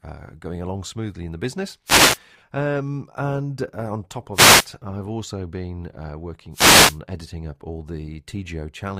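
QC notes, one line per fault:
1.85–2.19 s, 4.33–4.67 s, 6.52–6.99 s, wireless microphone noise hit: after "smoothly in the business", between "and uh on top" and "I've also been uh", and once more. The FM radio link fades as reflections cancel, so receiver hiss swells into a swish. On a spectrogram each appears as a broadband grey wash; the waveform thickens with noise.
2.33–2.43 s, frames out of order: two adjacent 40 ms blocks, which fits four frames apiece, play swapped. The result is a brief garbled flutter, visible as abrupt spectral discontinuities and waveform steps, with no time lost.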